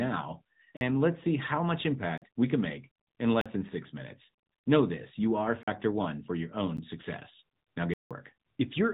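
Right from the start the whole clip sits behind the AMR narrowband mobile codec. Nothing above about 3.8 kHz gets through, so the speech sounds boxed-in and phone-like. The bitrate sounds like roughly 10.2 kbps, which is low enough that the vocal-tract model and its sparse pulse excitation leave a plainly audible buzzy, synthetic edge on the voice, the classic 2G/3G call sound.

On top of that there are blocks of digital silence, where the output simply drops to silence and comes back with no fade. The first four land at 0.77, 2.18, 3.41 and 5.63 s. Each is about 43 ms long, a short hole rather than a tick, and that length fits a 2048-sample buffer at 48 kHz not being filled in time. At 6.77 s there's a much briefer one, about 13 ms, heard more as a tick. The last runs from 7.94 to 8.11 s, roughly 171 ms, a clear dropout that points to four of those buffers missed in a row.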